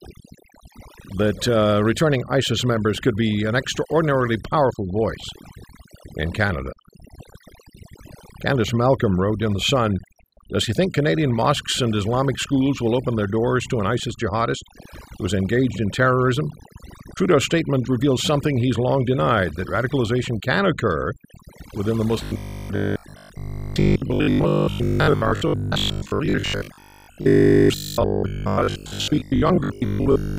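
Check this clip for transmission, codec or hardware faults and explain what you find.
Two faults are audible: overdone noise removal across the whole clip, and robotic sound from repeated short buffers in the final stretch.

Overdone noise removal runs from start to finish. The noise reducer was set too aggressively, so it pushes individual frequency bands down to nothing whenever they sit near its noise estimate, taking quiet speech detail with them. The background becomes near-silent with twinkling specks. On a spectrogram, the gaps look unnaturally empty, scattered with isolated dots, and the speech shows ragged, hollowed-out patches.

Robotic sound from repeated short buffers covers 22.24 s to 30.38 s. The speech turns into a rigid metallic buzz at 50 Hz that loosely follows the syllables. That pitch fits a roughly 20 ms segment being replayed, and the likely cause is audio arriving too seldom, so the last chunk loops while most of the real audio is skipped. 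The waveform shows identical cycles repeating, and the spectrogram shows evenly spaced harmonic lines 50 Hz apart.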